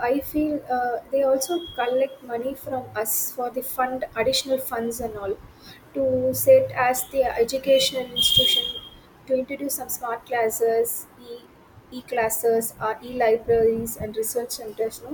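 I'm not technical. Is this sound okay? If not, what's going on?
No. From 13.92 to 14.82 s the speech suddenly slows by about 5% and drops nearly a semitone, then snaps back, likely a drift correction step.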